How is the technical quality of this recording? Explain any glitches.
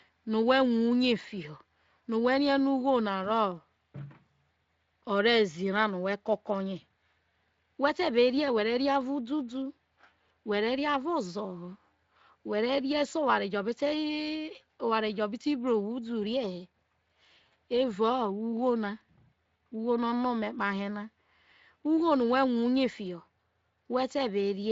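The technical quality of this recording is good, and there are no glitches to explain.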